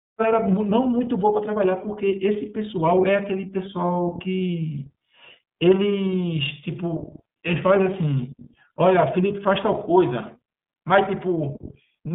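A speech recording carried through the iLBC codec for its whole length. The band runs from roughly 150 Hz to 3.7 kHz, with nothing above 3.8 kHz. Each frame is coded on its own, leaving a plainly audible rough, synthetic edge, which fits the 13.33 kbps, 30 ms mode.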